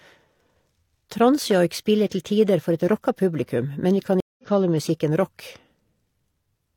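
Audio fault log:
4.20–4.46 s, stream reconnect: the connection dropped after "rocka publikum men vi", and the player had to reconnect and start a new decoder partway through the stream. That leaves a gap of about 0.18 s of silence. When the audio comes back at "kalle musikken", it picks up roughly 150 ms further on than where it stopped, so a short slice of the speech is simply skipped. The restart comes in with a brief muted or faded onset.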